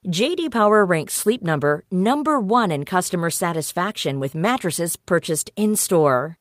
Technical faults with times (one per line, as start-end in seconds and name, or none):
none